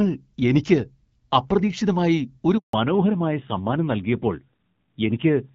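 At 2.57 s the speech stops for about 160 ms, a handover gap that runs until 2.73 s. The call was being passed from one network to another, and no speech frames arrived during the switch, so the sound fades within a few tens of milliseconds into flat silence and whatever was said in that stretch is simply missing. Unlike a burst of packet loss, there is no stuttering, no repeated fragments and no concealment noise. The sound resumes with a different character from before.

That change is a fallback to narrowband, lasting from 2.73 s to the end. Up to the gap, the sound has the fuller, airier top of HD Voice wideband coding, with light codec damage consistent with a rate around 12.65 kbit/s. Afterwards, nothing above 4 kHz survives. Sibilants lose their edge and the sound turns duller and rougher, which points to a low-rate narrowband codec around 7.4 kbit/s. A plain low-pass filter would only muffle the sound. 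This drop also brings the rougher texture of the coarser coding, and it coincides exactly with the handover.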